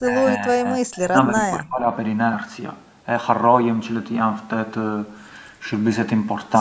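Speech suppressed in double talk is the fault here, likely from an echo canceller that could not separate the local talker from loudspeaker echo while both sides spoke. From 0.0 to 1.86 s the speech dips by up to about 35 dB, roughly one and a half seconds in all, within call-processed audio that carries nothing above 8 kHz.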